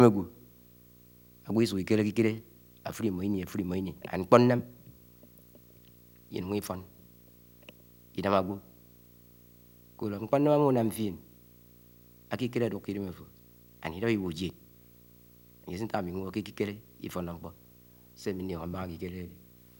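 A screen or video cable is coupling into the audio path for the whole speech clip, producing video or display buzz: a 59.94 Hz field-rate buzz with hash above it, plus a thin 15.7 kHz line-rate whine, sitting about 25 dB below the speech.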